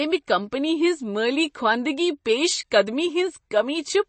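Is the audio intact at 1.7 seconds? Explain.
No. At 1.7 seconds, as throughout the speech, the treble stops sharply near 8.3 kHz and the sound turns plainly watery and swirly. That points to MP3 compression at a low bitrate, likely around 32 kbps, with weak frequency lines flickering between frames. A plain low-pass filter would only dull the sound, without the swirl.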